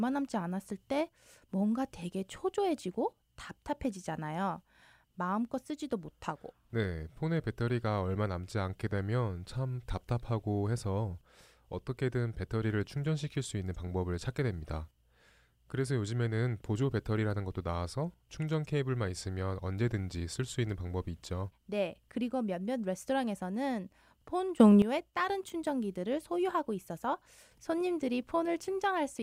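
At 24.6 s, just after "그리고 몇몇 레스토랑에서는 폰", the speech and its background noise leap up together by about 12 dB, holding until 24.82 s before "다른 충전기들을 소유하고 있어서". This sudden gain jump likely comes from a digital gain change applied instantly, without a smoothing ramp.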